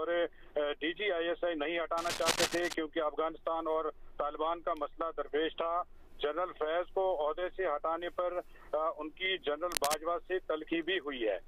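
From 1.97 to 2.74 s, and again briefly from 9.71 to 9.97 s, a dense, uneven scratching rustle sits over the sound at roughly its own loudness. This cable scratch noise likely comes from a worn cable or connector being moved, its contact resistance fluctuating rapidly.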